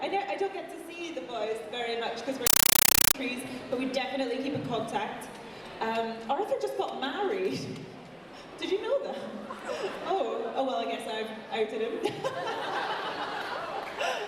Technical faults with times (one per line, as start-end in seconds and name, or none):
2.47-3.14 compressed stream played as audio